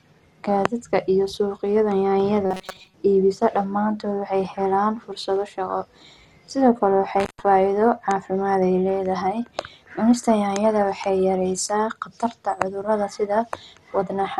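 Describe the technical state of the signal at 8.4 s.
At 8.4 s the speech sounds dull and gurgling, with a granular, watery roughness, as it does throughout the clip. This is likely MP2 compression, starved of bits at something like 64 kbps, so upper sub-bands switch off and the remaining bands are coarsely quantised.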